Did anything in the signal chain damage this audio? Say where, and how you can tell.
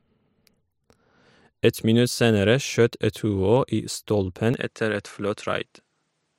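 Yes, at the capture stage: from 4.54 s to the end at 6.38 s the sound abruptly loses everything above 11.3 kHz, drops by roughly 5 dB, and gains a new noise floor around 50 dB below the signal, with no gap at the switch. This is likely an input switched to a poorer device mid-recording. A codec or filter change would narrow the band without bringing in a fresh noise floor and a level step at the same moment.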